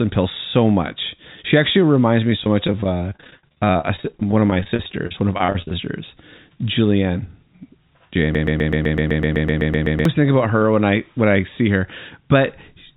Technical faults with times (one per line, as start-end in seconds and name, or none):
2.30-5.75 repeated packet loss (robotic sound)
8.35-10.05 broken-record loop